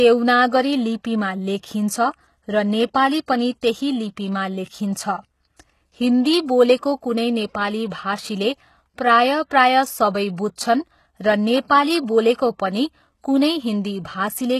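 From start to end, the treble above about 12.3 kHz is missing, and the upper band that remains sounds synthetic, with s sounds turning gritty and metallic. Damage this plainly audible points to HE-AAC compression, likely at a bitrate around 16 kbps. The treble above the coded lower band is rebuilt by copying lower bands upward, so its harmonics fail to line up with those below. That grit is what separates it from a simple low-pass cut, which would sound dull but clean.

From 10.56 to 10.58 s, a short hiss runs ahead of a sharp attack, spreading about 20 ms before it. This is pre-echo: the codec spread its quantisation noise across a block in which the attack came late, so the quiet moment before it filled with noise. Because the hiss comes before the onset rather than after it, it is not reverb or a decaying tail.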